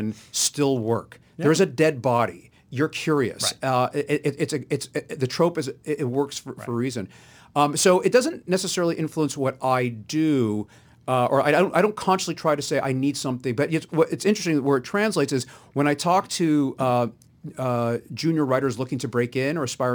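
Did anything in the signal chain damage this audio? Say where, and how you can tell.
Yes. Throughout the speech there is a fine hiss and roughness that rides on the signal: it grows on loud passages and on bright, high-frequency sounds such as sibilants, and disappears in the pauses. That signal-dependent behaviour points to sample clock jitter at the converter. The clock is wandering by a few microseconds, so each sample is taken slightly early or late. Steep, fast-changing parts of the waveform turn that timing error into noise about 30 dB below the speech.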